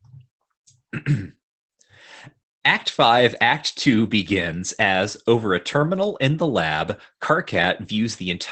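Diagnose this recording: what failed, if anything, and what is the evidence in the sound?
The speech sounds muffled and hoarse for the whole clip, with no crisp detail above about 8 kHz and a slightly robotic edge. This is Opus voice compression at the codec stage. The SILK coder trims the band to wideband and codes the excitation coarsely, which fits a low bitrate around 12 kbps.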